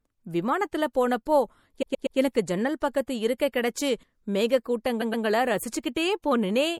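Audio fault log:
Throughout: MP3 compression, likely at a low bitrate such as 64 kbps. With so few bits to spend, the encoder drops the treble above a fixed cut-off and lets weak frequency lines blink on and off from one frame to the next. The result is plainly audible: a watery, swirling texture under the speech, metallic chirps on s sounds, and consonant attacks that smear rather than snap.
1.81 to 2.17 s and 5.01 to 5.25 s: repeated frames. A block of compressed frames about 120 ms long was played again, three extra times in the first run and twice in the second. The decoder loops the same slice of speech, which is heard as a stutter. The runs add 360 ms and 240 ms to the clip's length.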